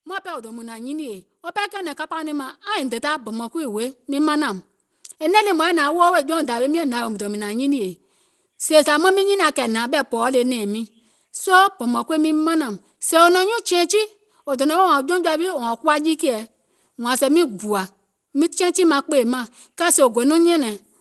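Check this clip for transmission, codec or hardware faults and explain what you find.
One fault stands out: automatic gain rising across the first half of the speech. From 0.22 s to 10.9 s, just before "soo bɔ̀mɔ̀ŋ kuii miŋ", the level climbs steadily by about 15 dB. The gain control judged the input too quiet and kept raising its gain until it settled. Voice and background noise swell together, which separates it from a speaker simply getting louder, where the noise floor would stay put. The slow, smooth ramp over roughly ten seconds also sets it apart from a compressor's quick pumping. The call path beneath it sounds normal, with the top end stopping near 12 kHz, as a super-wideband Opus link would.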